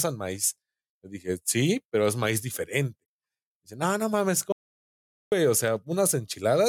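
At 4.52 s, just after "no no mames", the speech cuts off abruptly. This is an audio dropout to silence. It lasts until 5.32 s, about 0.8 s. The gap is dead silence, with no room tone or background left underneath. Speech then resumes mid-flow. Whatever was said in that stretch is gone. The likely cause is a brief loss of the input signal, such as a failed link, while recording carried on writing silence.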